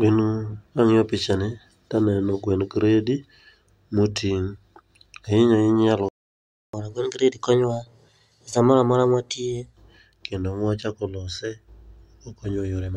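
Speech that stops dead at 6.09 s and stays silent until 6.73 s, a gap of about 0.65 s. That points to a playback stall, likely the player running out of buffered data. Unlike a brief dropout, it is far too long to be a lost packet. From 6.73 s to 9.73 s comes catch-up at higher speed: the speech runs at 1.15 times normal rate, with pitch raised by about two semitones, then settles back. Because tempo and pitch rise together and then return to normal, this is resampled catch-up rather than a standalone pitch shift.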